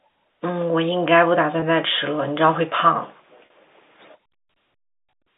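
At 1.60 to 1.62 s and again at 3.46 to 3.50 s, the speech shows packet loss with pitch repetition. The receiver fills each gap by repeating the last pitch period. The first gap, about 20 ms, fits a single lost packet and sounds like a brief buzzy hold on the voice. The second, about 40 ms, points to two consecutive losses and is a longer held buzz before speech resumes. The narrow telephone band from G.711 coding remains audible throughout.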